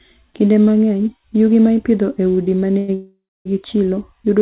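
Right after "ipidho e udi ma", a fading buzz-or-hiss fill runs from 2.78 to 2.90 s, then again from 2.94 to 3.47 s, where it dies to silence for about 0.26 s. This call audio freeze likely comes from delayed packets emptying the jitter buffer, so the speech resumes intact but later.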